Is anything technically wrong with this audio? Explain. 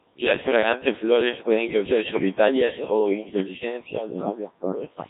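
Yes. Throughout the speech, the Codec 2 vocoder has done heavy damage. At about 1.3 kbit/s it keeps only pitch, voicing, energy and spectral shape, then rebuilds the voice from sine waves. The result sounds robotic and buzzy, with nothing above 3.8 kHz.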